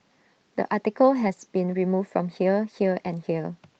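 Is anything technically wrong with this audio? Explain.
Yes. At 1.27 to 1.29 s there is a lost packet rebuilt from error correction. One 20 ms stretch was missing, which fits a single lost packet. The following packet carried a low-bitrate backup copy of it, and the decoder played that copy instead. So there is no gap or dropout. That short moment sounds rougher and noisier than the audio around it. It comes over the call path, whose top end stops near 8 kHz.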